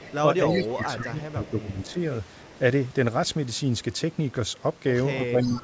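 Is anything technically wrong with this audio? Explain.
Yes, two faults recur through this speech clip.

Echo leak, at 0.0–0.15 s, 0.53–0.74 s, 1.85–1.93 s, 2.45–2.57 s and 5.42–5.61 s: a copy of the voice trails it by about 310 ms. It is strongest near 0.6 s, about 10 dB below the speech, and elsewhere roughly 20 to 35 dB down. The likely cause is a loudspeaker-side echo canceller letting residual pickup through.

Speech suppressed in double talk, from 0.75 to 1.98 s and 5.2 to 5.63 s: the talker's level sags by up to about 10 dB in patches, covering around a second and then a few tenths of a second. Overlapping speech seems to have made the canceller turn down its own talker along with the echo.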